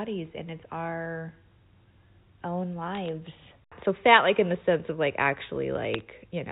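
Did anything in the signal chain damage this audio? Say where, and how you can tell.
Yes, bit errors on a digital phone line: sharp ticks of crackle at 2.95–3.09 s and 5.94–6.01 s, where flipped bits, roughly one to one and a half in a thousand, corrupt individual G.711 samples.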